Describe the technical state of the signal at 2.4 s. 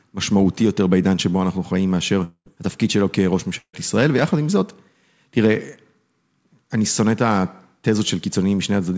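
At 2.4 s the speech sits inside a gap from 2.24 to 2.48 s: the last sound smears into a fading buzz, then about 70 ms of silence, and the audio resumes with that stretch missing. This is likely a long network dropout; unlike a brief packet loss, the concealment runs out and goes silent.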